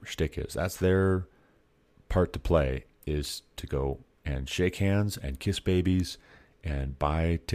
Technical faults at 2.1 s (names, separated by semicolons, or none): none